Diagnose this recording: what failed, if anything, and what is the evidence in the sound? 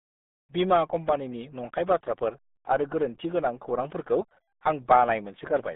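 RealAudio 14.4 codec damage runs through the whole clip, a codec-stage fault. The speech is confined to about 200 Hz to 3.7 kHz, with nothing above 3.8 kHz, and sounds heavily muffled and gargly. That fits a low-rate coder near 8 kbit/s built for dial-up modems.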